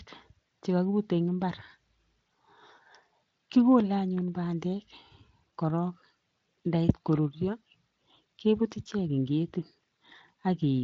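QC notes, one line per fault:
Nothing to flag on this speech clip, just the usual Speex encoding with the top end stopping around 7.6 kHz.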